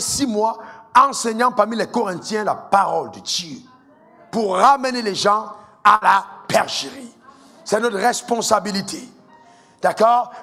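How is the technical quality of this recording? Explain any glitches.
There is one glitch: a burst of packet loss at 5.95 to 6.03 s. Several packets arrived too late or not at all. The receiver stretched the last sound for about 59 ms, fading it into a held buzz or hiss. Then the audio jumps ahead, with about 60 ms missing.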